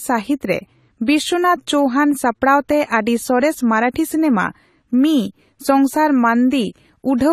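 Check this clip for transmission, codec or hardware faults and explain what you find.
There is one fault, and it runs through the whole recording. The speech carries AAC compression damage, and it is plainly audible. Nothing is present above 14.1 kHz, so the highest frequencies are missing and the sound is dull. The likely cause is AAC-LC coding at a low rate, which fits a stream of around 32 kbps. The encoder quantises each frame's spectrum coarsely against a hearing model. Bands it judges unimportant get too few bits. Sibilants turn fizzy and smeared, and sustained sounds warble.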